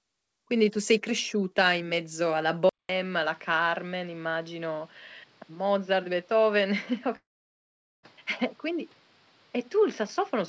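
At 2.69 s the speech cuts out for about 0.2 s and returns duller and boxier, with nothing above 6 kHz, against the 8 kHz ceiling of the G.722 call audio before it. It is about 5 dB quieter, with a new noise floor roughly 35 dB down, and stays that way to the end. This is likely an input switched to a poorer device.

From 7.16 s to 8.06 s the sound breaks off. A brief fading buzz is followed by roughly 0.8 s of silence, and the speech then resumes with about 0.88 s missing. The likely cause is a long network dropout, with the receiver extending the last audio before going quiet.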